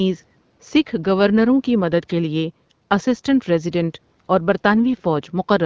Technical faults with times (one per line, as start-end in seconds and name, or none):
none